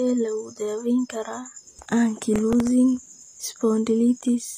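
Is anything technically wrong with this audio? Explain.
Yes, there are two faults. Throughout, HE-AAC compression is likely: the treble sounds synthetic and gritty, with s sounds lispy and nothing above 15.4 kHz. The upper band is rebuilt from copied lower bands rather than coded, which fits a low bitrate of about 24 kbps.

From 2.36 to 2.67 s there is processor overload crackle. A handful of very short buffers, each around a millisecond and a half, missed their deadlines, and each was filled with old audio. The hard-edged repeats pile up into a brief gritty tearing on the speech.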